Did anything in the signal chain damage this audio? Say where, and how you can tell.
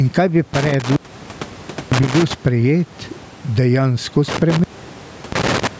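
Yes. Gain pumping at the input stage: the gain ducks by around 10 dB under loud syllables, likely from excessive mic gain feeding a fast limiter.

Intermittent contact in the analogue wiring: after "kaj bi", 0.54 to 2.34 s, the signal crackles and drops out for about 0.95 s. After "sprejet dejansko", 4.28 to 5.67 s, it drops out again for about 0.69 s.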